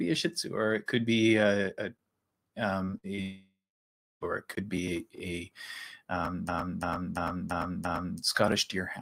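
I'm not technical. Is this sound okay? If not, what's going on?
No, it has a few glitches.

Short concealed packet loss: at 2.85–2.90 s and 3.16–3.19 s, about 20 ms of sound went missing and was patched over, leaving a quick smear or wobble.

Burst of packet loss: at 2.98–3.06 s, about 60 ms vanished in a row. The gap was filled with a held buzz or hiss that fades, then the sound skips ahead.

Long network dropout: from 3.21 to 4.23 s, about a second of audio is gone. It fades into silence for roughly the last two-thirds of a second before returning, most likely because the connection dropped out.

System hang loop: from 6.49 to 8.19 s, the same 0.34-second snippet repeats five times, about three times a second, like a stutter. The system froze while replaying it.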